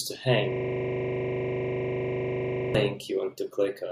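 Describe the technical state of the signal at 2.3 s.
At 2.3 s the signal is inside a system hang loop running from 0.52 to 2.75 s. The host stalled while the audio hardware kept replaying one 40 ms stretch of its ring buffer, giving a rigid 25 Hz buzzing stutter repeated 56 times.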